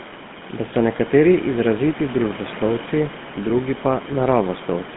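GSM full-rate codec damage runs throughout: the speech is squeezed into 150 Hz to 3.5 kHz and rebuilt from sparse excitation pulses, leaving a plainly buzzy, gravelly roughness.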